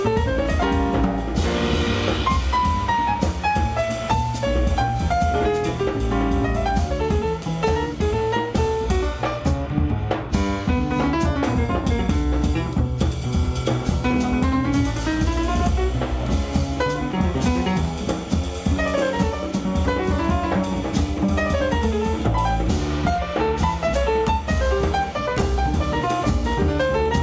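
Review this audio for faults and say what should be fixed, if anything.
No faults; nothing to fix.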